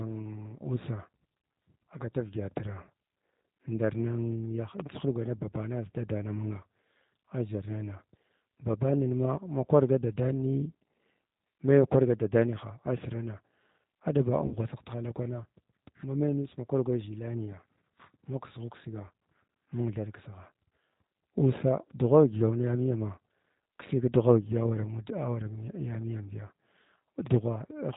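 Throughout the speech, G.729 codec damage is plainly audible. The narrow, slightly rough and synthetic character, with nothing above 4 kHz, points to 8 kbit/s G.729-family coding. The codec rebuilds each frame from a vocal tract filter, pitch predictor and sparse pulses.

From 14.46 to 14.57 s, VoIP packet loss concealed by the speech codec stretches the last sound into a fading buzzy tone or coloured noise. About 60 ms of audio went missing, which fits three 20 ms packets. The decoder extrapolated pitch and filter with falling gain, leaving speech weak until it recovered.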